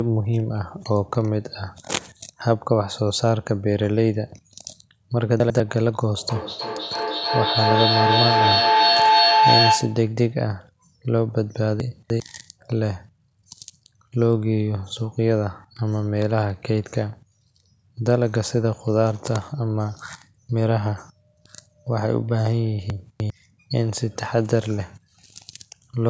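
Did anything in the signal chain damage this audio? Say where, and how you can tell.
Yes. Chunks out of order at 5.4–5.6, 11.8–12.2 and 22.9–23.3 s: in the network buffer, 100 ms chunks played one or three places late, jumbling the sound.

Feedback howl at 6.27–10.16 s: two call devices in one room formed a gaining acoustic loop. A tone near 1 kHz builds, with the loop repeating roughly every 300 ms, peaking about 4 dB above speech.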